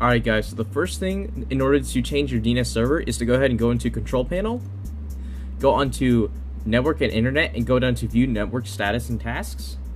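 No technical faults are audible.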